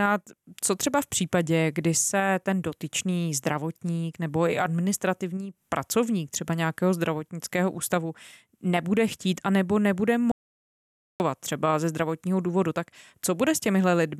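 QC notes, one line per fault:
10.32–11.20 s, audio dropout to silence: the input was likely lost, through a broken link or stray mute, while silence kept being written. After "chtít a nebo nebude" speech cuts to total silence, no room tone, for 0.88 s, returning at "třeba ze zdravotního důvodu".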